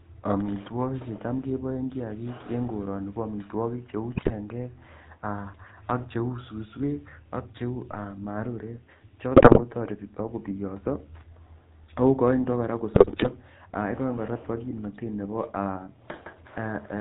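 A buzzy, gravelly roughness runs through the whole speech clip, with nothing above 4 kHz; this is the GSM full-rate codec, whose pulse-driven vocal-tract model fits a 13 kbps link. From 4.14 to 4.32 s the speech breaks into squawks and gargling: GSM bit errors, with flipped bits corrupting the decoder's filter, pitch and gain values. A low thump at 7.92 s marks a DC step, where the waveform's zero line jumps and the offset then holds to the end while the speech carries on. The same squawking, gargled GSM bit errors return from 9.36 to 9.61 s and again from 12.94 to 13.31 s.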